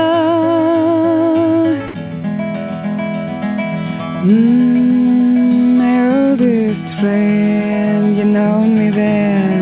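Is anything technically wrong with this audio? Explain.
Yes. At 1.88 to 1.94 s the sound gives way to about 60 ms of steady noise or near silence, losing about 40 ms of real audio. This is likely sound dropped by the voice detector: the sender mistook that moment for background and stopped sending, and the receiver played comfort noise until transmission resumed.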